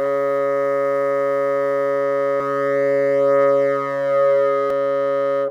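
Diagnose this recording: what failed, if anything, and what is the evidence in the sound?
The music picks up a doubled audio track from 2.40 s to 4.70 s. A second full-band copy trails the original by roughly 0.7 s, sitting about 5 dB down, and it cuts in and drops out abruptly at those points. There's no decay or room colour on it, so it isn't reverb or an acoustic echo. The likely cause is a second, slower capture path being mixed back in, or an edit holding two copies out of step.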